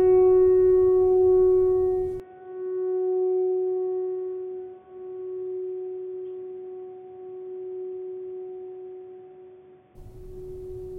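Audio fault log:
2.20–9.95 s, input switched to a poorer device: the music abruptly turns dull and boxy, with nothing above 3.5 kHz, a level drop of roughly 5 dB and a faint new noise floor far below the music, then clears again at 9.95 s. No silence marks either transition. The likely cause is the recording input changing mid-take to a narrower-band microphone or headset profile, whose restricted bandwidth, gain and self-noise replace those of the original source.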